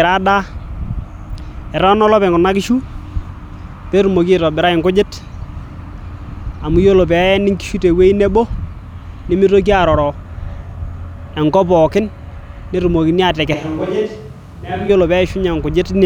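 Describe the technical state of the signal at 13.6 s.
A switch to a distant microphone runs from 13.54 to 14.89 s, covering 13.6 s. The speech abruptly turns roomy and hollow, with thinner bass and a drop of roughly 5 dB, while background noise rises to sit only about 30 dB under the speech. The likely cause is that the close microphone's feed dropped out and a farther pickup, catching more room reflection and ambience, stood in until the close signal returned.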